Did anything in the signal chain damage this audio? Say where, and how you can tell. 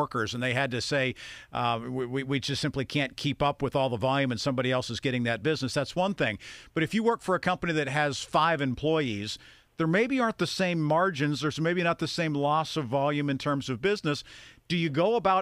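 No, nothing in the signal chain damaged this audio.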